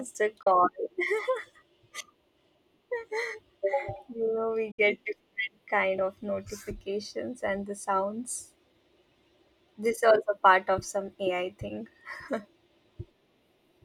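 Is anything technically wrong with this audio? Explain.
Yes. A digital broadcast dropout occurs twice in this speech, from 0.42 to 0.47 s and from 4.71 to 4.79 s. The receiver stopped getting usable frames, either losing the signal or rejecting frames with bad checksums, and muted until valid data resumed. Each gap opens with a fade of about 8 ms into silence. About 32 ms is lost the first time and 64 ms the second, consistent with one and two frames respectively. The missing audio is gone, not delayed.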